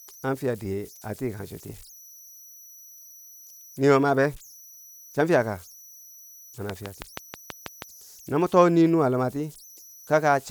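A speech recording with converter idle tones running throughout: an undithered delta-sigma converter settles into repeating bit patterns on low-level input, leaving a faint whistle around 5 kHz, about 27 dB below the speech. On a spectrogram it shows as a thin horizontal line near 5 kHz, clearest in pauses. From 6.70 to 7.83 s, just before "no mo too", a train of clicks ticks over the sound at a regular 6.21 per second, about seven in all, peaking roughly 10 dB above the speech, likely from interference by nearby equipment or a faulty connection or power supply. On the waveform they appear as evenly spaced sharp spikes, and on a spectrogram as vertical broadband stripes.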